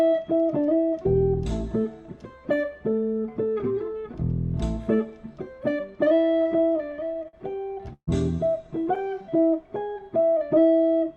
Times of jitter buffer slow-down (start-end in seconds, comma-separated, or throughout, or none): 8.99-9.42